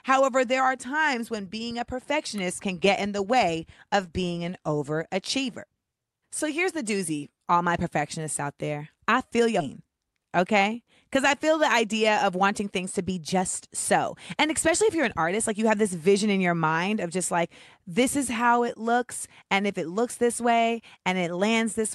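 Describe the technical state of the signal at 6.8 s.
At 6.8 s the speech comes through intact, with no dropout, glitch or distortion beyond the ordinary coding of the call path it travelled through.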